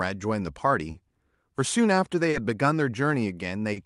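Speech with small timing hiccups recurring at uneven intervals, where short pieces sound repeated or stretched. This is clock drift between sender and receiver: the sender's clock runs roughly 2 percent slow, so the receiver's jitter buffer keeps draining and the receiver pads it with repeated fragments. On top of that, sounds are held too long, with a faint buzz or dip, at 0.91–0.97 s, 2.30–2.36 s and 3.73–3.79 s. Each is a short stall from a late packet: the buffer ran empty, the receiver stretched the last sound for about 30 ms until the packet arrived, and playback resumed from the same point with nothing lost but the delay grown by 30 ms.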